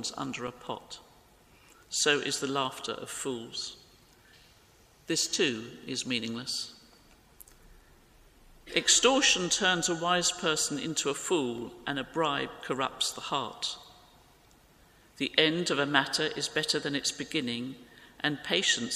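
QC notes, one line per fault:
0.48 s, block of digital silence: the output buffer went unfilled in time or a calculation produced invalid values, so a block of zeros about 2.9 ms long (fits a 128-sample block) replaced the audio, heard as a tick or dip.
2.78 s, block of digital silence: same dropout, about 1.45 ms (fits a 64-sample block), too brief to register as a gap.
11.58 s, block of digital silence: another 1.45 ms block, with the sound cutting out and back unfaded.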